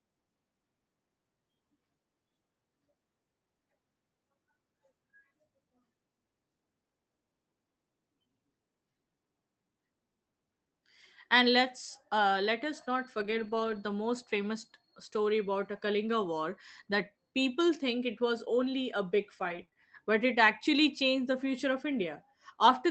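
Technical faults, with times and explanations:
13.19 to 13.77 s, lost packet rebuilt from error correction. A run of packets went missing here. Each was covered by a low-bitrate backup copy carried in the following packet, the in-band error correction of an Opus call stream. About 300 ms of sound was rebuilt this way. So there is no silence or dropout. The patched stretch sounds rougher and grainier than its surroundings, because the backup copies hold less detail than the normal frames.
19.49 to 19.77 s, repeated packet loss (robotic sound). Packets dropped or arrived late several times in quick succession. Three separate holes appear, the longest 25 ms. The decoder filled each one by extending the last sound it had, covering about 56 ms, with roughly 70 ms rebuilt in all. About a fifth of this span is concealed. The fills come so close together that the sound turns choppy, with small pieces missing between them.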